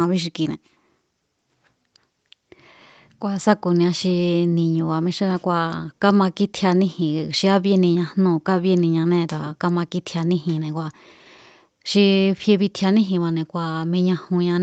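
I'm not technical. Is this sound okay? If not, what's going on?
Yes, nothing here sounds wrong.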